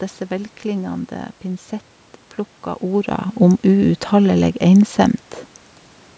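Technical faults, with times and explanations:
No technical faults can be heard in this speech.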